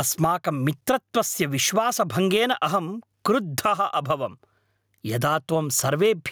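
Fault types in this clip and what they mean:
Gain pumping: the gain swings around 15 dB, pulled down under each loud syllable, likely from excessive gain driving a fast limiter.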